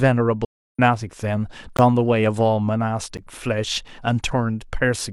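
From 0.45 to 0.79 s the speech sinks into a hole about 0.34 s long, the mark of AAC frame loss with muting. The decoder received nothing for that stretch, which fits roughly eight lost frames, and filled it with a zeroed spectrum. Because the overlapping transform windows still blend the neighbouring frames, the sound fades out and back in over about a frame at each side, so the gap has soft edges.

At 1.77 s and again at 3.17 s there is a block of digital silence. The output buffer was probably not filled in time and was played as zeros, for about 18 ms and about 11 ms respectively. The second gap fits a 512-sample buffer. Unlike the AAC dropout, these cut to dead silence and back instantly, and the second gap is short enough to be heard as a tick rather than a hole.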